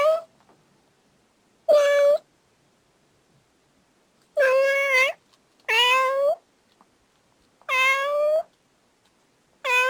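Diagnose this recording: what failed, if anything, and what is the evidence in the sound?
Sample-format conversion stage: crude rate conversion, likely a 44.1 kHz to 48 kHz step done by repeating samples, leaves a gritty inharmonic fizz riding the louder, brighter sounds throughout.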